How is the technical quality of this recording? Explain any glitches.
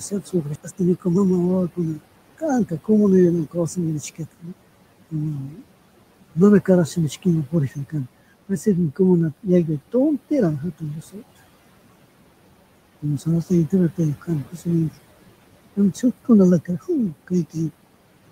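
The recording is impaired by heavy noise suppression, one forward jump and a stretch of hurried playback near the start.

Noise suppressor artifacts run through the whole clip. The room noise, sitting about 17 dB below the speech, is pushed down by about 18 dB in pauses and rises back under the speech. Unlike a plain gate, this pumping moves band by band.

Speech cut by the noise suppressor is heaviest from 0 to 11.2 s, where roughly a second and a half of speech is lowered by up to about 18 dB. Shorter cuts fall at 13.0–14.7 s and 15.8–17.6 s, about 13 dB deep. Mistaken for noise, soft consonants and endings sound swallowed rather than dropped outright.

A skip ahead at 0.55–0.57 s jumps over about a second of speech with no gap or filler. The two sides are spliced almost directly. That separates it from a dropout, which leaves silence or concealment noise where the missing audio was.

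A jitter buffer speed-up follows from 0.61 to 3.40 s. With too much audio queued, the receiver trims short pitch-period pieces repeatedly, playing at about 113% speed and removing nearly half a second. Pitch stays put, so it sounds hurried, not chipmunk-like as a resampling error would.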